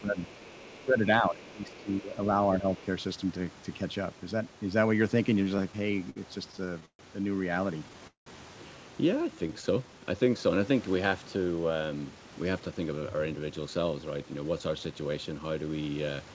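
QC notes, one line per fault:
0.01–0.17 s, 0.73–2.13 s and 2.59–2.67 s, speech suppressed in double talk: the talker's level sinks by about 10 dB in the first two stretches and about 5 dB in the third, with the long middle one spending roughly a second ducked. It sounds like the voice being pulled back, most likely an echo canceller that couldn't tell its own talker from the far-end echo and turned everything down together.
0.16–0.85 s, 1.44–2.03 s and 2.77–2.85 s, other side's voice leaking through: a faint second voice sits under the talker, about 25 dB down in the first two stretches and about 30 dB down in the short last scrap. The likely cause is the far end playing on the talker's loudspeaker and not being fully cancelled out of the mic.
5.44–7.02 s and 7.79–8.29 s, repeated stalls (stutter): the audio keeps catching and restarting, 17 small hold-ups in the first run and 4 in the second, the longest around 190 ms. 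Nothing actually drops out; the receiver stretches the last sound each time the jitter buffer empties and picks up once packets arrive. The second run is the rougher one, with almost half its span filled in, so it drags noticeably.
9.35–10.30 s, jitter buffer slow-down: this second of speech plays at about 89% speed with the pitch unchanged, roughly 110 ms longer than it should be. Sounds come out a touch drawn out, as the receiver repeats pitch periods and bits of pauses to build up a reserve in its buffer.
12.15–15.70 s, jitter buffer speed-up: the reverse, about 110% speed at the same pitch for three and a half seconds, with around 400 ms trimmed in total. It comes across as rushed delivery, as the receiver snips short pitch-period chunks to work off excess buffered audio and bring the delay back down. The G.722 call path underneath tops out at 8 kHz.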